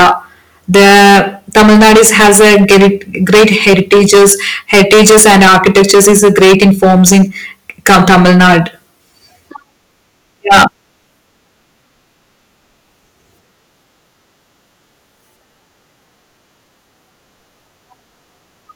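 Speech with hard clipping at 0.0–0.12, 1.56–2.90, 3.30–4.34, 4.73–7.23 and 10.51–10.65 s, driven about 16 to 18 dB past full scale. Peaks are sheared flat, adding harsh high harmonics heard as fuzz, abrupt and gritty rather than the rounded warmth of soft saturation.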